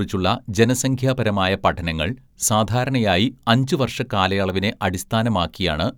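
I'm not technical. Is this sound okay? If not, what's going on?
Yes, this sound is okay, and there's nothing going on that needs fixing.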